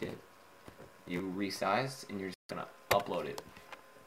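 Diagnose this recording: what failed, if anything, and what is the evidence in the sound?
For the first 1.2 seconds, from 0.00 to 1.20 s, the audio carries a steady buzz at about 93.8 Hz and plays slow, at 0.861 times normal speed, with its pitch essentially unchanged. This is a block size mismatch (padded) at the driver or buffer stage. The reading side takes full blocks, which fits a 512-sample buffer, but receives shorter ones and fills the remainder with zeros. Each block therefore ends in a tiny gap, producing the buzz, and the padding stretches the timing.

At 2.34 s the sound drops out completely for about 153 ms and resumes at 2.50 s. This is likely a Bluetooth stall on the wireless playback link. Interference delayed packets, the headphones' buffer emptied, and output halted until retransmitted data arrived. The clean cut to silence and the prompt resumption point to starvation at the receiving end rather than damage to the signal.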